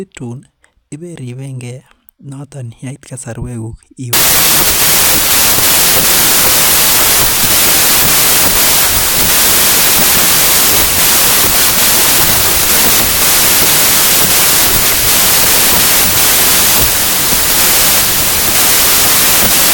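A speech clip where, from 4.13 s to the end, audio written as packed 24-bit integers is being read back as 32-bit integers, a wrong sample width. Each decoded value straddles parts of neighbouring samples, so only some of them keep the true signal's top bits. The result is loud, harsh noise with the speech buried underneath. Because every four bytes now count as one sample instead of three bytes, the buried speech also runs about 1.33 times too fast and too high in pitch.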